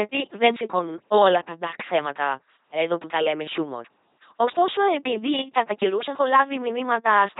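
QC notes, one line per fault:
throughout, LPC-10 vocoder: heavy, constant damage. The speech is rebuilt by a ten-pole filter driven by either a buzzing pulse or hiss, never a blend, giving a mechanical robot sound that a plain low-pass cut at 3.8 kHz wouldn't produce. This fits a 2.4 kbit/s stream.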